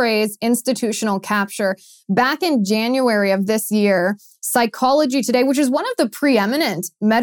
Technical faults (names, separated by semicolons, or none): none